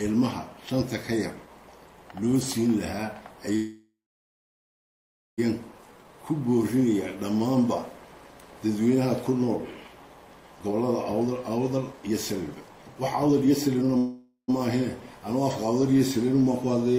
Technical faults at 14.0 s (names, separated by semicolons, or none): jitter buffer speed-up; call audio freeze